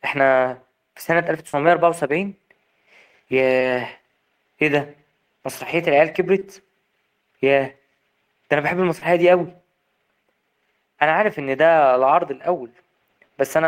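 Burst of packet loss at 1.47 to 1.55 s in this speech recording: about 60 ms never arrived, so the receiver stretched and faded the last sound before jumping ahead. Short concealed packet loss at 6.39 to 6.43 s and 8.99 to 9.03 s: each 20 ms gap was patched with continued sound, leaving a brief smear or wobble.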